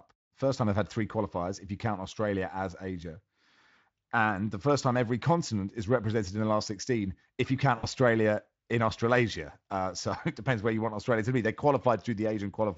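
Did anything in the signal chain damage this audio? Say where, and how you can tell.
Yes. At the network stage, speech packets were lost right after "if you", from 7.77 to 7.88 s. The gap amounts to about 60 ms of audio, which fits three consecutive 20 ms frames. The Speex decoder's VoIP packet loss concealment filled the hole by repeating its last pitch and filter while lowering the gain frame by frame. You hear it as a short stretch of buzzy tone or coloured noise that fades. The voice stays weak or distorted just after packets resume, because each decoded frame builds on the concealed one before it.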